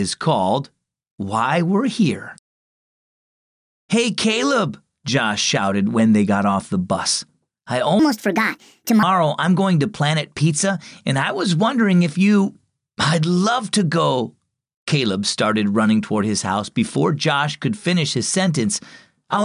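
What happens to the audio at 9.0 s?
Right at 9.0 s you're at the tail of a wrong sample rate glitch that runs from about 7.99 to 9.03 s. The samples are being played back faster than they were captured, with no conversion, so everything speeds up by 1.45 times and jumps about 6.45 semitones higher. That ratio fits 22 kHz material pushed out at 32 kHz. It sounds squeaky and hurried, then drops back to normal pitch and pace just after 9.0 s.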